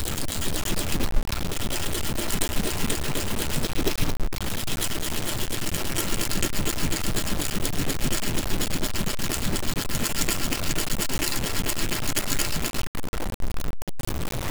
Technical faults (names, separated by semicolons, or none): low bit depth without dither; overlapping chunks